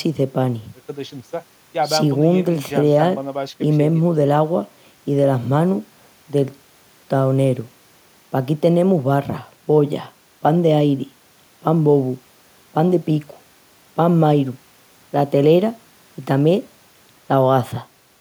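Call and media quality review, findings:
Nothing to flag on this one; no audible faults anywhere in the speech, so no ticket needed.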